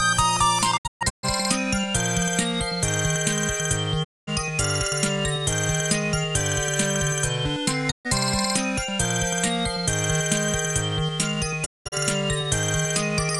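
Digital broadcast dropouts mute the sound at 0.76–1.25 s (scattered short holes, longest 128 ms), 4.03–4.29 s, 7.90–8.07 s and 11.64–11.94 s (longest hole 192 ms). The receiver discards failed frames, and the sound fades over 20 ms into clean silence rather than the hiss of analogue fading.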